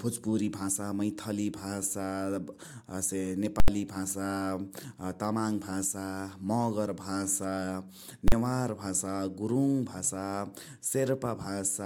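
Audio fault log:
3.60–3.68 s and 8.28–8.32 s, invalid numbers at full scale: the speech is suddenly swapped for a block pinned at one extreme value, 80 ms the first time and 40 ms the second. Some calculation produced infinite or invalid values that got clamped to the largest positive or negative sample, so the output sits flat at that extreme, far beyond the speech peaks. You hear the hard jumps onto and off that level as a very loud bang, with nothing in between.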